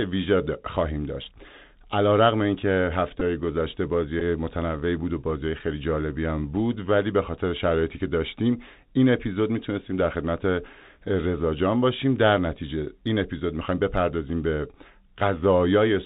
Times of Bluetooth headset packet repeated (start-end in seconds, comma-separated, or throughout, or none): 3.20, 4.20